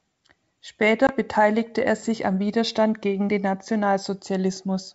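At 1.07 to 1.12 s, just before "beteiligte er sich am", the speech hits packet loss on an ADPCM call: a hard-edged silent hole where a couple of packets went missing. Because ADPCM codes only differences, the decoder's predictor and step size lose track of the sender's, so the speech resumes with brief, slight distortion before settling. That recovery is what separates it from a clean dropout. The G.722 wideband sound is clear on either side.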